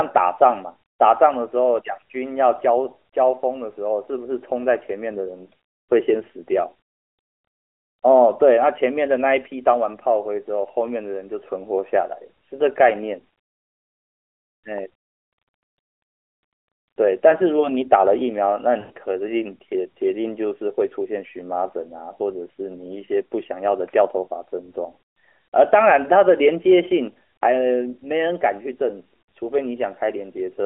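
Lost AMR speech frames, from 18.80 to 18.92 s: the speech briefly smears into a drawn-out, fading sound before recovering. This 100 ms gap fits five consecutive 20 ms frames that failed their checks over the radio link. For each missing frame, the decoder reused the last good pitch and vocal tract settings at steadily lower gain, stretching the preceding sound. The speech then resumes thin for a moment, within the narrow telephone band of the AMR-NB codec.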